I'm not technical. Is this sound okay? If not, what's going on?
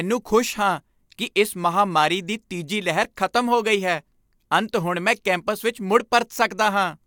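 Yes, nothing stood out as a problem when I listened to this recording.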